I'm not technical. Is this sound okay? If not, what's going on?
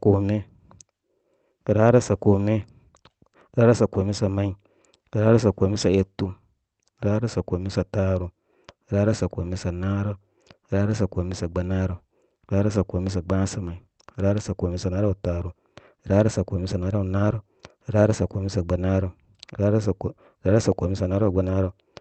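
Yes, nothing stood out on listening; it sounds like ordinary speech carried over a normal internet call.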